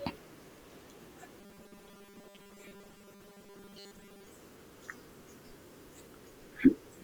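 Speech clip. From 1.41 to 4.27 s it turns robotic, a rigid metallic buzz at 200 Hz. This is likely from repeated short buffers, about 5 ms, replacing most of the audio.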